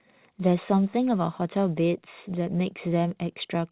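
No technical faults can be heard in the speech, which arrives over a call path that carries nothing above 4 kHz.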